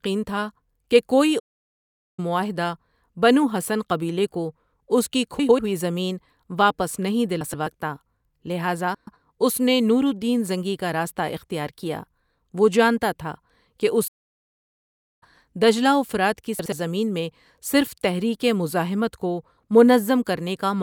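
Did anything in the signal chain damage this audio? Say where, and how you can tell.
Yes. At the playback stage there are two playback stalls, from 1.39 to 2.20 s (about 0.79 s) and from 14.07 to 15.23 s (about 1.14 s). The speech falls silent mid-flow, then resumes exactly where it stopped. That points to the player likely running dry or being blocked, not to a dropout that loses material.

Before the decoder, frames out of order appear at 5.39–5.59 s, 7.41–7.67 s after "ہوئی زمین واپس نہیں", 8.95–9.20 s before "اس نے نور الدین", and 16.59–16.72 s between "دجلہ و فرات کی" and "میں صرف تحریک مزاحمت". Each is a brief garbled flutter. Swapped blocks of 96, 128, 128 and 64 ms fit runs of 32 ms frames delivered in the wrong order. Unlike the stalls, no time is lost.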